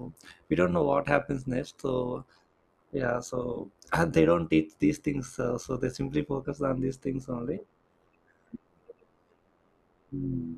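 Throughout the speech, overlap-add ripple pumps the level by about 11 dB at roughly 100 Hz. Badly matched frame overlaps cause a fixed-rate metallic buzz, not slow tremolo.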